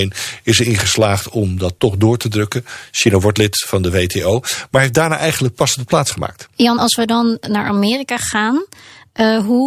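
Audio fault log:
No faults are audible anywhere in this speech recording.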